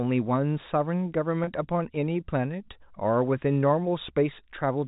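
At 1.44 s, packet loss with pitch repetition: about 30 ms of the speech goes missing, and the receiver repeats the last pitch period across the gap, giving a brief held, buzzy tone.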